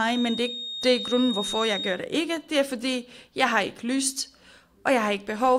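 A speech recording with a feedback whistle from the start to 2.02 s. A thin, steady tone at 3.7 kHz sits behind the voice, roughly 10 dB below it, and swells and fades slowly in level. It never grows or runs away, and it stops at 2.02 s. The likely cause is a loudspeaker-to-microphone loop poised right at the edge of feedback. There, one high frequency keeps ringing without building into a howl.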